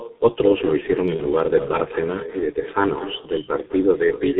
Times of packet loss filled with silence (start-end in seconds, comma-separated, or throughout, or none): none